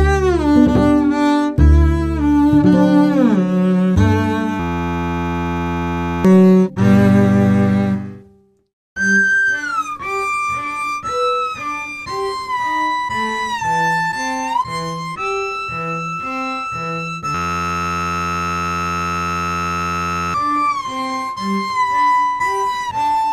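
Two system hang loops freeze the audio, from 4.60 to 6.25 s and again from 17.35 to 20.34 s. Each time, a single 11.61 ms slice repeats exactly, giving a steady buzz at about 86.1 Hz. That fits a 512-sample ring buffer the hardware kept replaying while the machine or driver stalled. Roughly 1.5 s and then about 3 s of real audio are lost underneath.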